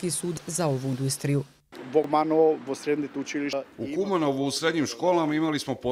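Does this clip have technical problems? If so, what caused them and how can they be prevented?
Yes. There are four abrupt jumps where the sound skips forward with no gap, at 0.37 s, 0.93 s, 2.04 s and 3.53 s. That pattern points to a likely dropped buffer (overrun): the recording software didn't pick up its samples before the hardware wrote over them, so a chunk vanished and the edges got spliced together. The first loss is roughly a third of a second, the one at 3.53 s about a fifth, the others about a tenth. To prevent it, give the capture thread higher priority or use larger buffers so it keeps up.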